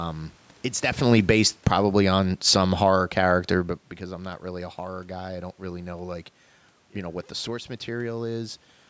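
Between 0.83 and 3.81 s, the automatic gain control judges the input too loud or its background noise too strong and steadily lowers its gain by about 8 dB. The automatic gain falling makes the speech start loud and then sink, with the room noise dropping along with it, just before "because I'm not really".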